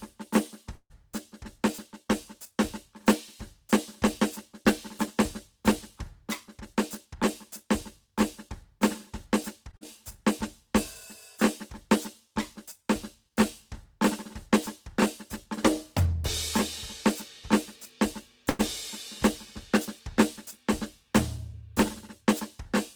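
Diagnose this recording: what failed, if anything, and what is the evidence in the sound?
Call audio freeze, 0.75 to 0.92 s: the music stops moving forward for about 145 ms. The last sound is carried on as a fading buzz that ends in about 60 ms of silence, and then the music resumes exactly where it stopped, with nothing lost. This points to the network and receive side. Packets were likely held up in transit, the jitter buffer emptied, and concealment filled the wait, adding 145 ms of delay.

Jitter buffer speed-up, 6.57 to 9.65 s, 15.99 to 16.23 s and 21.03 to 21.62 s: the music runs fast at unchanged pitch, at 102%, 115% and 106%. The tempo visibly pushes ahead in the short 16 s stretch. The receiver's buffer was holding more than its target, so it cut repeated short slices of a pitch period or so, removing roughly 70 ms, 50 ms and 40 ms to bring latency back down.

Short stall from a late packet, 9.71 to 9.75 s and 18.50 to 18.61 s: a sound is held too long with a slight buzzy sustain, 15 ms in the first case and 96 ms in the second. 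The music then continues from the same point with nothing missing. A packet was late, the jitter buffer ran dry, and the receiver stretched the last sound until the data arrived. The second stall added 96 ms of delay.

Skip ahead, 9.77 to 9.83 s: just after the first stall, playback jumps forward. Roughly 100 ms of music is gone, and the two sides are bridged by only about 39 ms of fill, so the join is nearly direct. This is a network or jitter-buffer drop. With later audio already queued, a stretch was discarded, and the delay fell by roughly 70 ms.

Jitter buffer slow-down, 10.67 to 13.31 s: the music drags slightly, at 98% speed with the same pitch, and sustained sounds are drawn out. This is the receiver rebuilding its reserve. It repeated single pitch periods over and over, adding 72 ms in total, which comes from the jitter buffer stage rather than the source.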